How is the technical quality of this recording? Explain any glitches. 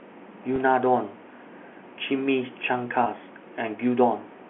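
Two brief dropouts in the speech, both from packet loss with pitch repetition, carried over G.711 telephone coding at 64 kbps, with the sound held to the 200 Hz to 3.4 kHz telephone band.

At 0.56 to 0.58 s and again at 3.04 to 3.06 s, audio went missing for about 20 ms, consistent with a single lost packet each time. The receiver filled each gap by repeating the most recent pitch period, so instead of a click or silence you hear a short, slightly buzzy hold on the sound before normal speech resumes.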